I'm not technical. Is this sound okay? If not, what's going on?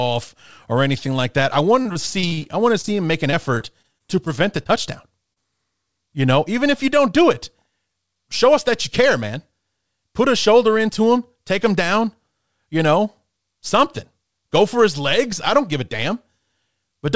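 No, not quite. It's speech over a call connection, and the line hiccups a few times early on.

The first problem is repeated packet loss, which gives a robotic sound. Right after "anything like that I", from about 1.82 to 2.89 s, the connection kept dropping small bits of audio, nine times in about a second. Each hole was patched by stretching out the last bit of sound, so the speech turns choppy. The same thing happens again, more mildly, from 3.31 to 4.40 s, with six smaller gaps.

The second problem is short concealed packet loss. Just after that, at 4.63 to 4.67 s and again at 5.33 to 5.38 s, a tiny slice of audio went missing, only a couple of hundredths of a second each time. The receiving end filled the gap with its best guess and slid back into the real audio, so you might notice a quick smear or wobble. A short sound could slip away there too.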